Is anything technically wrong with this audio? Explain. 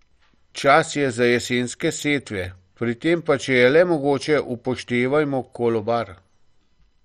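Yes. Throughout the speech, the sound is dull and carries a gurgling, granular distortion. Nothing is heard above about 13.9 kHz. This is likely MP2 compression at a low bitrate, which fits something near 56 kbps. MPEG Layer II divides the sound into 32 sub-bands and shares out bits among them. Starved of bits, it shuts off the upper bands and quantises the rest coarsely. Bands flicker in and out, giving the heavy, watery texture heard here.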